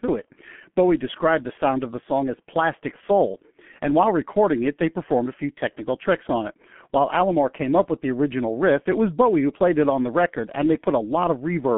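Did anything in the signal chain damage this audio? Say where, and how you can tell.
Yes. The damage sits at the codec stage, and it runs through the whole speech clip: this is G.723.1 coding at around 6.3 kbit/s, and the damage is heavy. Nothing comes through above 3.7 kHz, and the band sits roughly 150 Hz to 3.4 kHz, so the speech sounds muffled and hoarse with smeared consonants. The coder works in 30 ms frames and its voice model updates slowly, so a spectrogram shows a hard ceiling with no energy above it and blocky, frame-stepped formant tracks.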